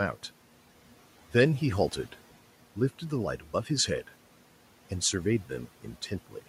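A speech clip with speech cut by the noise suppressor between 3.39 and 3.7 s. The suppressor mistakes part of the speech for noise and turns it down with the background, by about 8 dB at its deepest. Roughly a tenth of a second in total sounds swallowed and faint. Room noise sits about 23 dB below the speech.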